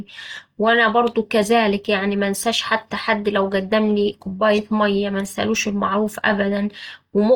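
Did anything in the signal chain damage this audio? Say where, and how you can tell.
Yes, at the codec stage. The speech sounds grainy and rough throughout, with noisy texture where tones should be clean, yet the band still reaches about 20.5 kHz. That points to Opus compression, likely in music mode at roughly 24 kbps, filling starved bands with noise.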